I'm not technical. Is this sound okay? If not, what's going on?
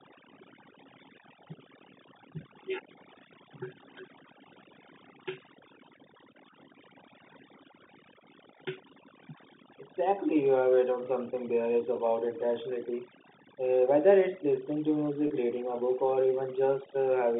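No. Overdone noise removal runs through the whole clip. The cleanup was set too strong, so it switches off frequency bands it mistakes for background noise, taking quieter parts of the speech with them. The background drops and breaks up into twinkling specks.

At 15.27 to 15.30 s, between "listening to" and "reading a book or", there is packet loss with pitch repetition. About 30 ms of audio went missing, and the receiver filled the gap by repeating the last cycle of the voice, which comes out as a brief, slightly held buzz. The telephone-line coding itself can be heard carrying the speech cleanly.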